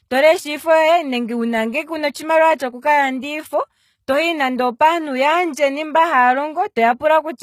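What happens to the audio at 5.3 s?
At 5.3 s the speech carries the same HE-AAC compression damage heard throughout: s sounds turn gritty and lispy, and nothing sits above 14.9 kHz. The treble is likely rebuilt by spectral band replication, which fits a bitrate near 20 kbps.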